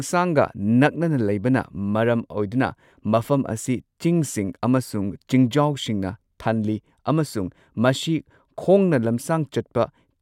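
Nothing in the speech stood out as a technical fault on listening.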